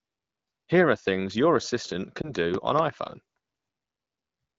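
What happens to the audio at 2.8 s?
A loud pop falls between 2.54 and 2.81 s. It is two sharp pops in quick succession, standing well above the speech. A sudden voltage pulse, likely from a plug, switch or static, has landed on the signal. The speech carries on underneath.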